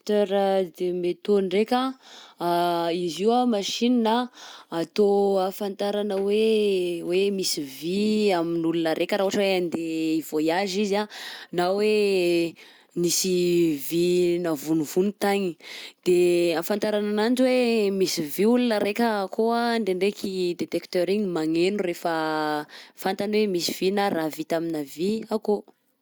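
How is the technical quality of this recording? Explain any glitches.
No technical faults or glitches can be heard anywhere.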